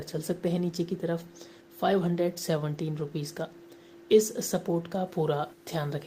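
From 5.07 s to the end at 6.06 s, the audio was likely truncated to low bit depth without dither, with grit consistent with about 9 bits. The rounding error tracks the signal about 35 dB down, so quiet passages turn grainy.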